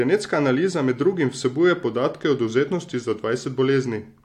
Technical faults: none

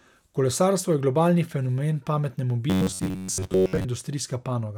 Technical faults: robotic sound from repeated short buffers

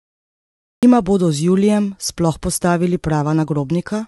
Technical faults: low-delay AAC compression; cut-off start

